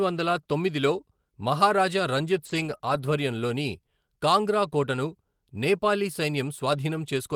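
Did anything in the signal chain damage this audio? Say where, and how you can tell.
Yes, the damage happened on the network, with the codec covering for it. From 2.45 to 2.75 s and again from 2.81 to 2.99 s, packets went missing, and each stretch was rebuilt as a lost packet from error correction. The decoder played the low-bitrate backup copies carried in the packets that followed, so nothing drops out. Instead, both stretches turn coarser and noisier.

Between those two stretches, at 2.77 to 2.81 s, about 20 ms arrived too late and had no backup copy, which makes it a short concealed packet loss. The receiver covered the gap by extending the preceding sound and then blending back into real audio. This is audible as a brief smear or wobble wedged between the two rough patches, so the disturbance runs almost continuously from 2.45 to 2.99 s.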